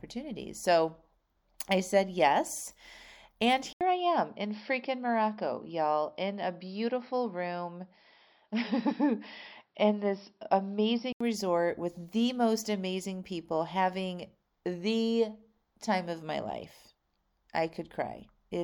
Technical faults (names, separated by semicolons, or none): input switched to a poorer device